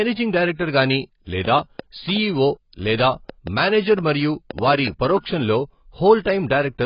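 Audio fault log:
throughout: AAC compression, likely AAC-LC at a rate fitting about 16 kbps. Nothing survives above 5.1 kHz, and heavy coding damage leaves the speech dull, smeared and warbling, unlike a plain low-pass filter, which removes the top but leaves the rest intact.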